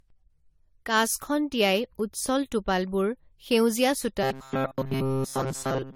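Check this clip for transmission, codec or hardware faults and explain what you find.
Two faults are audible in the speech. Generation loss runs throughout: likely from about four successive AAC-LC encodes at 64 kbit/s, each re-quantising the sound and leaving it swirly, hollow, with blurred attacks.

Robotic sound from repeated short buffers runs from 4.23 s to the end: the last few milliseconds likely replay while most of the real audio is skipped, imposing a rigid metallic 133 Hz buzz, which fits a buffer of roughly 7.5 ms.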